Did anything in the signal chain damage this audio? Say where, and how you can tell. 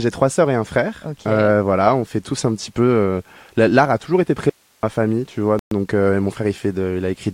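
Yes. From 4.50 to 4.83 s there is an audio dropout to a faint residue: the sound cuts abruptly to hiss around 40 dB down, not dead silence. This points to an upstream capture or buffer stage that likely lost the signal while the path stayed live.

At 5.59 to 5.71 s a playback stall leaves about 120 ms of silence. This marks the player as likely starved of data.

From 5.71 to 6.51 s a time-compressed catch-up runs 1.15 times fast. Pitch stays unchanged, unlike a resampling speed-up, because the player drops and cross-fades small pieces to clear its backlog.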